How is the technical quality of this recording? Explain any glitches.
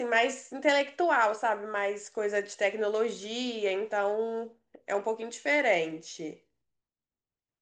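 No glitches can be heard anywhere in the recording. The speech runs without any interruption or audible fault.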